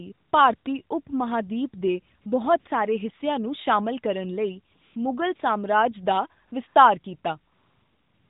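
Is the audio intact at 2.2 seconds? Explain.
No. From 2.22 to 2.26 s there is AMR comfort noise: for 40 ms the phone sent no speech frames, and the receiver filled the gap with smooth synthetic noise. On a spectrogram this is a flat, featureless band; on the waveform, a steady low-level fill.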